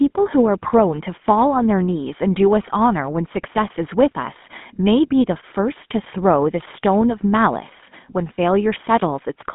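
Throughout the speech, a GSM full-rate codec is at work: the coder models the vocal tract and rebuilds the excitation from sparse, regularly spaced pulses, which fits a 13 kbps full-rate link. The result is a plainly audible buzzy, gravelly roughness, with the band confined to roughly 150 Hz to 3.6 kHz.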